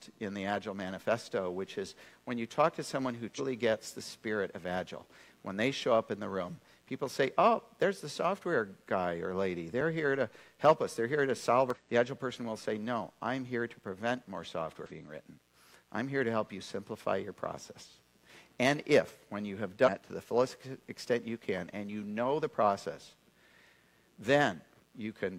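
Mains buzz runs from start to finish: switching spikes from a dimmer, rectifier or unshielded cable leak in twice per cycle of the 60 Hz supply, stacking harmonics up into the kilohertz range. The result is a steady, raspy buzz sitting about 40 dB below the programme.

Damaged data in a compressed stream strikes at 3.35, 11.70, 14.86 and 19.83 s, each lasting roughly 55 to 60 ms. Corrupted bytes make the decoder misread frames and hunt for the next header, so each spot sounds like a short chirp or squawk.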